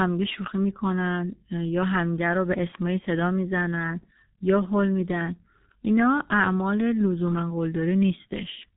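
From start to finish the speech has passed through the G.723.1 codec, at a low rate consistent with its 6.3 kbit/s mode. The codec works in 30 ms frames and refreshes its model of the vocal tract slowly, so heavy damage builds up: nothing survives above 3.8 kHz, leaving the speech muffled and boxy, while the coarse frame-by-frame modelling adds a hoarse texture and smears consonants into one another.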